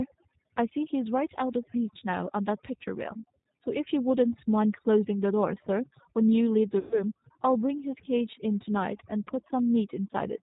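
A speech recording whose noise reduction was set far too aggressively: overdone noise removal clamps frequency bands down whenever they sit near the noise estimate, so the background drops and breaks up into twinkling specks and the quieter parts of the voice are stripped away. The signal then went through a G.729 codec. The band-limited, slightly synthetic roughness fits 8 kbit/s G.729 rebuilding the voice from a vocal tract filter and a handful of pulses, with nothing above 4 kHz and plainly audible coding damage. From 6.79 to 7.03 s there is VoIP packet loss concealed by the speech codec. The decoder extrapolated from its last pitch and filter state across a gap of about 120 ms, so the sound is stretched out and fades, and the voice stays weak and distorted briefly after the stream resumes.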